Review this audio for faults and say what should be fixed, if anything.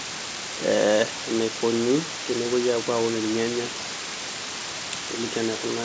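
Low bit depth with dither affects the whole clip. At 4 bits, dithered rounding error becomes a steady hiss nearly as loud as the speech. Keep at least 16 bits through every processing stage before export.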